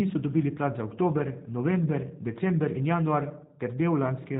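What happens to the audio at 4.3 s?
At 4.3 s the speech still carries G.729 codec damage, present throughout the clip. The speech is rebuilt from a vocal-tract filter, pitch predictor and sparse pulses every 10 ms, which fits an 8 kbit/s stream, so it sounds rough and synthetic. A spectrogram shows a hard ceiling at 4 kHz.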